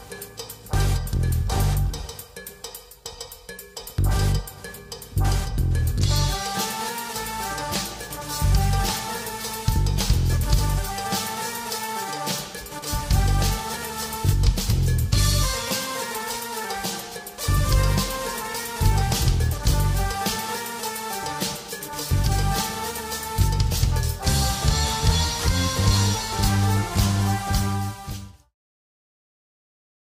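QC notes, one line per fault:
No faults were found in this clip. Near the end the level eases down in a smooth fade out, starting around 27 s and finishing at 28.56 s, with no click or hard edge.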